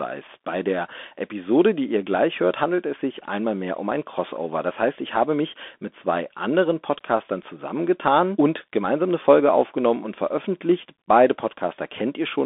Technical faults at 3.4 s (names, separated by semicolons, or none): Bluetooth CVSD headset codec